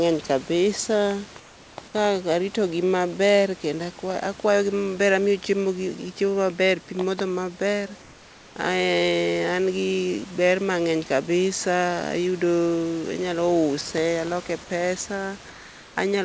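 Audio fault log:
1.40–1.78 s, 8.02–8.56 s, 15.50–15.96 s: comfort noise in place of the background. Pause background becomes steady, featureless hiss about 2–3 dB quieter, likely discontinuous transmission with receiver-generated fill.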